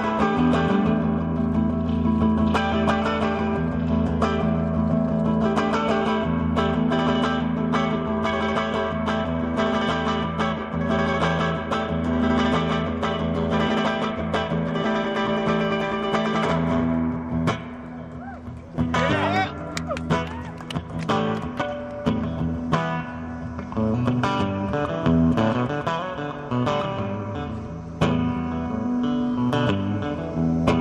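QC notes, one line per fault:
No faults were found on this pass.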